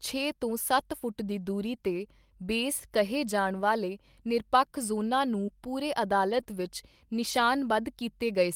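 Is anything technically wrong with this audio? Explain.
Yes. The speech has brief network-loss artefacts of two kinds.

Lost packets rebuilt from error correction: at 0.79–0.81 s, 5.47–5.49 s, 6.31–6.41 s and 7.31–7.41 s the sound turns momentarily rougher and noisier, with no gap. The decoder played low-bitrate backup copies carried in the following packets. The longer 60 ms patches fit about three separate packets.

Short concealed packet loss: at 5.45–5.49 s and 6.43–6.47 s there is a short smear or wobble lasting about 20 ms. That audio never arrived in time, so the receiver extended the preceding sound to cover the hole and then blended back into the real signal.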